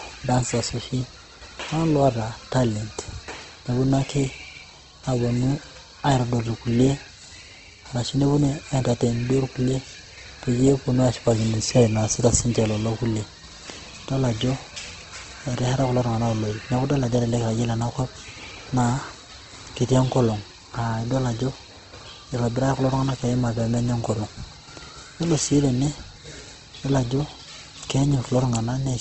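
Throughout the speech, plainly audible Opus compression damage is present, likely from its CELT music mode running near 16 kbps. Nothing is present above 8.2 kHz, and the band-filling leaves voiced sounds noisy, rough and grainy rather than swirly.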